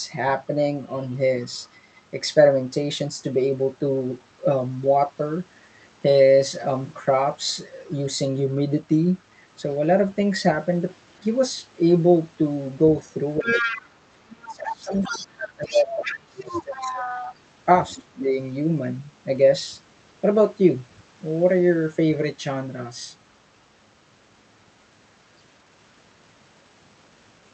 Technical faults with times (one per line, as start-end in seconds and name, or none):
0.85-1.72 other side's voice leaking through
13.13-17.35 other side's voice leaking through
13.40-13.70 speech suppressed in double talk
14.35-17.22 speech suppressed in double talk
17.89-18.21 other side's voice leaking through
17.94-18.30 speech suppressed in double talk
20.96-21.03 other side's voice leaking through